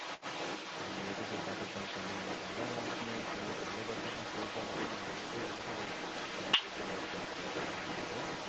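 Throughout the recording, the other side's voice leaks through. The likely cause is an echo canceller that failed to strip the loudspeaker's playback from the microphone signal, so that far-end voice rides along the whole time, sitting a few decibels louder than the talker. It sounds like a second, competing voice.

From 6.57 to 6.66 s, speech is suppressed in double talk. With both sides talking at once, the canceller likely could not tell the near talker from the echo and pulled the level of both down. The talker's voice briefly dips by roughly 10 dB for about a tenth of a second, a short hole in the sound. Above the 8 kHz ceiling of the call's Opus path, nothing remains in either voice.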